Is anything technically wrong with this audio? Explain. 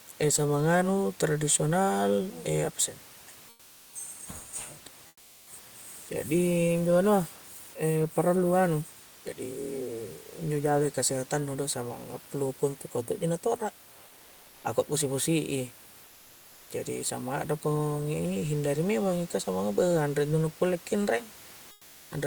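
Yes. Comfort noise in place of the background occurs at 3.49–3.93 s, 5.07–5.47 s, 14.07–14.63 s, 16.05–16.69 s and 21.71–22.11 s. The sender likely stopped transmitting during speech pauses (Opus DTX), leaving the receiver to synthesise noise. The room's real background, about 26 dB below the speech, turns flat and featureless. It drops about 2 dB in most gaps and about 4 dB at 5.07 s, with no drop at 14.07 s.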